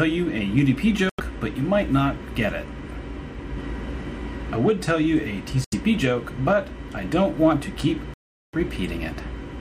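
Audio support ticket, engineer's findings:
Dropouts to silence at 1.09–1.20 s, 5.64–5.74 s and 8.14–8.55 s (about 92, 79 and 397 ms). Likely Bluetooth stall: headphone buffer ran dry awaiting resent packets. Flat waveform, blank vertical spectrogram gaps.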